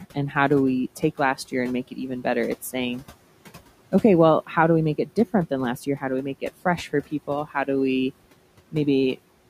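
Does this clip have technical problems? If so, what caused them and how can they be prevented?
Yes: speech cut by the noise suppressor at 0.96–1.54 s (after "do we"), 1.88–2.26 s (after "and make") and 6.42–7.68 s (after "do we make"), with dips of about 10, 13 and 16 dB. The suppressor mistook quiet speech for noise and pulled it down with the background. Unlike a dropout, sound fades rather than vanishing. Lower the suppression strength or raise mic level so soft speech stays well above the noise.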